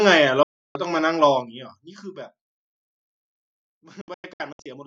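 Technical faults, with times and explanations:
0.43–0.76 s and 4.01–4.66 s, digital broadcast dropout: the receiver stopped getting valid frames and muted until clean ones returned. At 0.43 s the speech fades out in 3 ms to one solid hole of about 320 ms. From 4.01 s the loss is scattered as short gaps over 640 ms, the longest 96 ms. Each event drops roughly 320 ms of sound, which fits about ten lost frames. The waveform shows flat-line gaps and the spectrogram shows sharp-edged blank columns.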